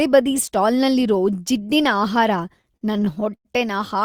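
Speech, with repeated stalls (stutter) from 2.57 to 3.47 s: thirteen brief hitches where packets arrived late, the jitter buffer ran dry, and the receiver stretched the last sound until audio resumed. About 256 ms is filled this way, nearly 30% of that stretch, with the longest gap 99 ms and nothing lost, so the speech drags rather than skips. On a spectrogram the harmonics freeze into short flat bands. The waveform shows repeated cycles that taper in the longer gaps.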